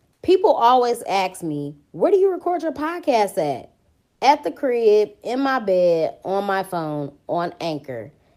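It's a speech clip, and right after "record your podcast at", from 4.09 to 4.21 s, the real background drops out for 120 ms and you get comfort noise in place of the background: a smoother hiss about 2 dB quieter, sitting about 50 dB below the loud parts. That's likely discontinuous transmission, and it fits Opus DTX, where the receiver fills the pause with synthetic noise.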